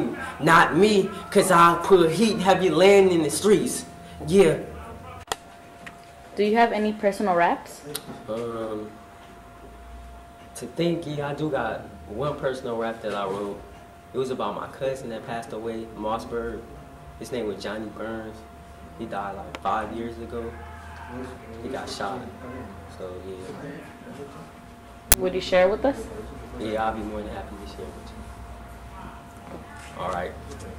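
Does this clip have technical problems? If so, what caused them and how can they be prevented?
Yes. There is an uninitialised buffer at 25.12 s, lasting about 20 ms. A block was played before any audio was written into it. Leftover memory was read as samples and heard as a short crack in place of the sound. To prevent it, clear each buffer to zero and only start playback after it is filled.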